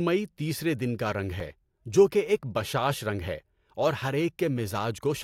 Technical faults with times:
1.40 block of digital silence

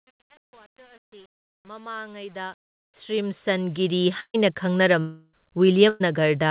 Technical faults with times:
0.00-4.09 truncation distortion on a fade
4.20-4.36 burst of packet loss
5.00-5.35 long network dropout
5.89-6.02 burst of packet loss

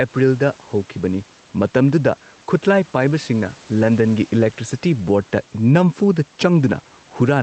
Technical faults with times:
0.00-7.43 gain pumping

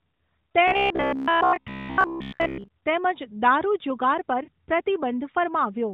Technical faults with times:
0.68-2.68 robotic sound from repeated short buffers
4.44-4.50 lost AMR speech frames

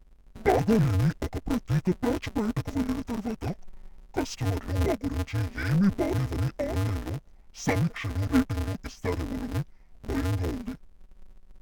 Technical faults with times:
0.00-11.61 interleaved audio read as planar

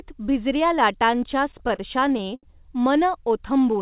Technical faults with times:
1.52-2.45 repeated stalls (stutter)

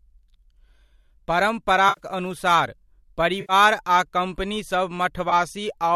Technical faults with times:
1.89-2.00 AAC frame loss with concealment
3.40-3.53 AAC frame loss with concealment
5.29-5.33 AAC frame loss with concealment

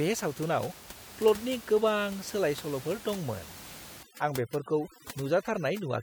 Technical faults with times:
4.03-6.03 overdone noise removal

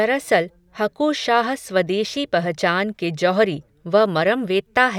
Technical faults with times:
none

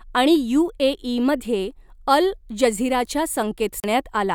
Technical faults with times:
3.80-3.84 CD skip

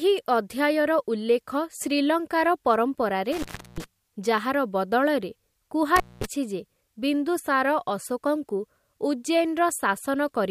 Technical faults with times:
3.32-3.84 intermittent contact
5.96-6.25 intermittent contact

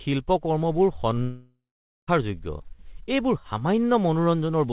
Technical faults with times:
1.22-2.09 long network dropout

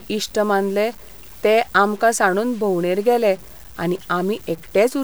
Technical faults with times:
0.00-5.04 low bit depth without dither

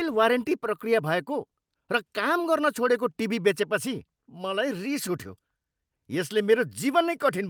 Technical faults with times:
none

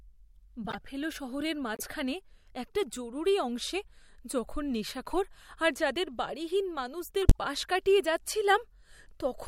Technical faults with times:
0.64-0.75 corrupt frame decoded
1.75-1.82 corrupt frame decoded
5.11-5.18 corrupt frame decoded
7.22-7.37 corrupt frame decoded

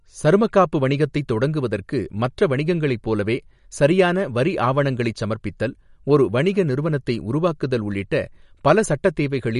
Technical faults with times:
0.00-9.59 MP3 compression

